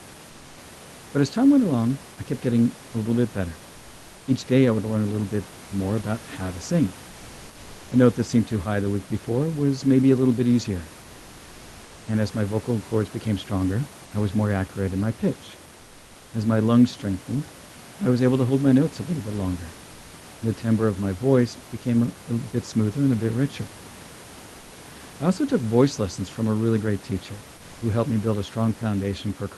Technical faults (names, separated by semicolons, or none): comfort noise in place of the background